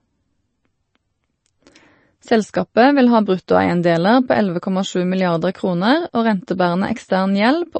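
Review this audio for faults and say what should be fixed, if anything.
The speech carries plainly audible coding damage for its whole length, and the likely cause is MP3 compression at a low bitrate. The treble stops abruptly at about 8.3 kHz, the fixed cut-off an MP3 encoder imposes when bits run short, which fits a rate around 32 kbps. Weak frequency lines are dropped frame by frame, so they flicker on and off and give the sound a watery, swirling texture. To prevent it, keep a lossless or much higher-bitrate master and encode from that.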